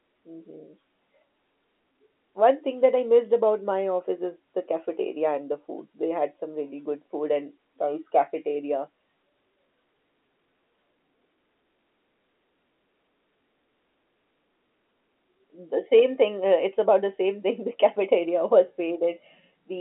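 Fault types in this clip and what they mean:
No faults can be heard in this speech recording. It carries the narrow band of G.711 telephone coding, with the sound held to roughly 250 Hz to 3.4 kHz and nothing above 3.8 kHz.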